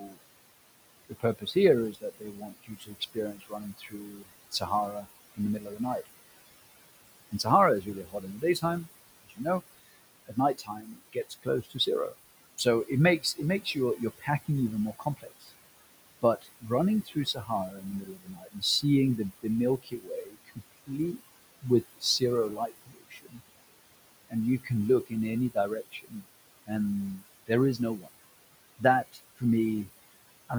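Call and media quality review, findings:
Noise suppressor artifacts, whole clip: background drops by about 19 dB in the gaps and comes back up under the speech, so the noise floor pumps along with the talker. The suppressor is pulling down whatever bands it reads as steady noise, frame by frame. The room noise itself sits about 15 dB below the speech, which is fine at the source.

Speech cut by the noise suppressor, first four spots: 0.00–0.19, 1.09–6.07, 7.31–15.51 and 16.22–18.84 s. Soft parts get ducked by up to about 20 dB and sound swallowed.

Speech cut by the noise suppressor, next four: 19.41–23.4, 24.29–26.7, 27.46–28.09 and 28.79–29.89 s, with the deepest cut at about 21 dB. The suppressor is treating soft consonants, word endings and quiet phrases as background. Across all eight stretches, roughly 6.4 seconds of speech is affected.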